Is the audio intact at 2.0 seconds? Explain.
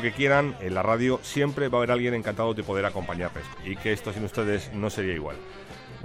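Yes, the audio is intact at 2.0 seconds, with no dropout, click, distortion or other fault audible at that moment.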